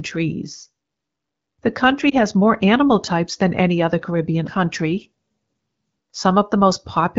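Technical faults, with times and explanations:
2.10–2.15 s: lost AMR speech frames. Radio errors made the AMR-WB decoder reuse its last good settings at lower gain, causing a brief dip or warble consistent with one lost 20 ms frame.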